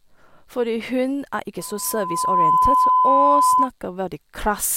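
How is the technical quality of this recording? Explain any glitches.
The recording has one clear fault. Right after "hun er ikke", from 1.58 to 3.70 s, loudspeaker feedback squeal: the microphone re-amplifies its own loudspeaker output until a 1 kHz tone swells over well under a second to about 10 dB above the speech. On a spectrogram it is a bright horizontal line; the waveform envelope bulges.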